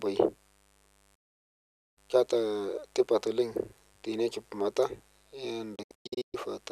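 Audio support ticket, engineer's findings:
Mains buzz, throughout: steady raspy buzz roughly 35 dB under the speech. Probable unshielded cable or dimmer/rectifier injecting switching spikes at 100 Hz, twice per 50 Hz cycle. Spectrogram: comb of horizontal lines at 50 Hz multiples reaching several kHz.

Digital broadcast dropout, 1.15–1.98 s: 816 ms mute with a quick 8 ms fade, resuming on "keata tipat oleng". Second dropout, 5.75–6.35 s: scattered holes totalling 384 ms, longest 120 ms. Receiver muting on lost or corrupt frames, likely 24 ms each. Waveform: flat-line gaps.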